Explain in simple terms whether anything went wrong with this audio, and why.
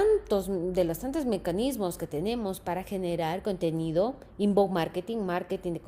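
Clock drift between sender and receiver runs through the whole clip. The device that recorded and sent this audio kept time with a clock running about 3 percent slower than the clock of the device playing it back. Because the sender delivered sound a little too slowly, the receiver's waiting buffer kept running low, so playback could not flow at a perfectly even pace from start to finish.

Repeated timing corrections run from about 0.02 to 5.55 seconds. To cope with that slow sender, the receiver kept stretching the sound by repeating tiny slivers of it, all in the same direction but at uneven moments, so the audio plays at about 97 percent of its proper speed. Altogether this adds roughly 0.15 seconds. You may notice small hiccups or a slightly unsteady, dragging rhythm.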